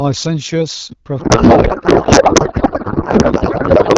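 Speech that sounds clear, as AMR wideband at around 12.65 kbit/s would, turns at 1.19 s into garbled noise and warble that barely tracks the talker, continuing to the end. This is a codec payload misread: octet-aligned AMR frames are being unpacked as bandwidth-efficient, so every field lands in the wrong place.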